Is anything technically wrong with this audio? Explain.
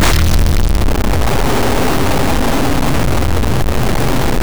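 Yes. For the whole clip the audio carries a harsh, buzzy distortion, and the quieter stretches never fall silent but fill with a loud, rough noise. This is most likely a stuck bit: one data line held permanently at 0 or 1, so about half the samples are pushed off by that bit's fixed weight, here a step of about -10 dBFS. Because that bit flips with the sign of small values, pauses turn into prominent noise.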